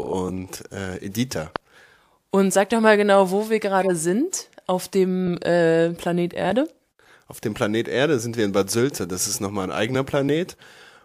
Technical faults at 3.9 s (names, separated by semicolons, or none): corrupt frame decoded